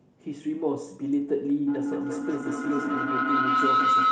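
At 1.67 s a feedback howl starts and lasts to the end. The microphone-to-loudspeaker loop gains level each trip, so repeats roughly a fifth of a second apart grow rather than decaying like echo, narrowing to a tone near 1.5 kHz about 6 dB above the speech.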